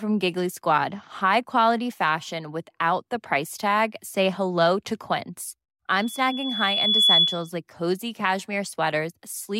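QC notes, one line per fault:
5.95–7.50 s, loudspeaker feedback squeal: a 3.4 kHz tone swells over about a second to roughly 10 dB above the speech, as the mic-speaker loop runs away.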